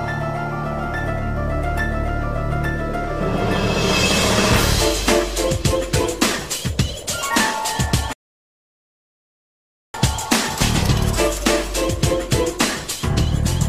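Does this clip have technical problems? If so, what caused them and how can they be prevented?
Yes. A rebuffering stall runs from 8.13 s to 9.94 s: the player exhausted its downloaded audio, fell silent, and waited for more data before continuing, adding 1.81 s to the playback. Unlike a network dropout or packet loss, where the missing stretch is simply gone and the sound jumps ahead, here the audio picks up exactly where it halted, so nothing is skipped. A larger playback buffer or adaptive bitrate switching prevents it.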